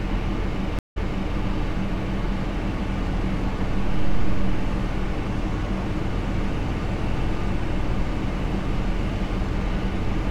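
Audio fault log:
0.79–1.37 s, stream reconnect: sound drops out for 173 ms, then resumes about 0.41 s earlier. The player reconnected and a fresh decoder restarted from resent data.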